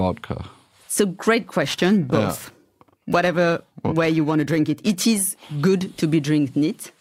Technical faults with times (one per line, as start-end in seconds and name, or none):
1.61-5.05 periodic clock jitter